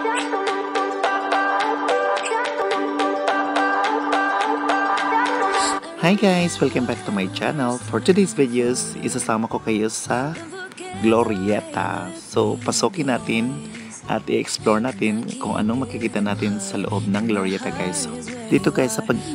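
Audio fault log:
No faults were heard in this clip. Nothing in the audio calls for an entry in the log.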